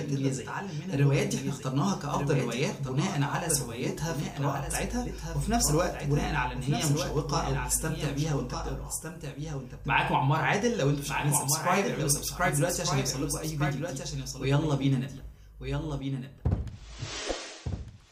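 Throughout, a doubled audio track: a full-band copy trails about a second behind, roughly 5 dB quieter, with no decay, likely from a second, slower capture path.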